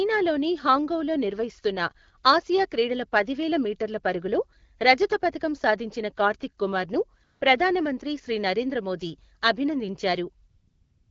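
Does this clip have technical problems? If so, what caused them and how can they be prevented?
Yes. From 7.23 to 7.41 s, and again from 10.49 s to the end, the real background gives way to a smooth, steady hiss that switches in abruptly. This is AMR comfort noise: the phone judged these gaps silent, stopped sending speech frames, and the receiver synthesised noise from a coarse level-and-spectrum description. Disabling discontinuous transmission (DTX), or recording on a path without it, prevents this.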